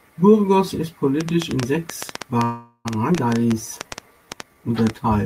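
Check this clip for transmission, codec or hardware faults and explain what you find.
Four faults are audible in this speech.

Train of clicks, 1.21 s to the end: irregular ticking, about 7.7 clicks per second and roughly 15 dB above the speech, likely from nearby interference or a faulty connection.

Call audio freeze, 2.43 to 2.87 s: a fading buzz-like continuation ending in a brief silence, likely as an empty jitter buffer filled 416 ms; speech then resumes without loss.

Skip ahead, 3.13 to 3.16 s: speech jumps abruptly forward, about 150 ms dropped while later audio waited, with the two sides nearly butted together.

Jitter buffer slow-down, 3.39 to 4.55 s: speech drags at 88% speed with unchanged pitch, as repeated pitch periods add 148 ms to rebuild the buffer.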